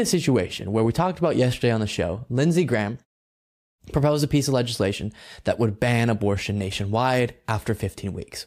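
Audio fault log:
Nothing wrong turns up anywhere in this speech clip, so there's nothing to log.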